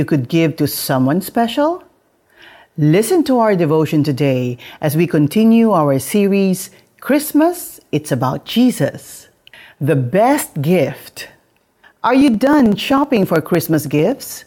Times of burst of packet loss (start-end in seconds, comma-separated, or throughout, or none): none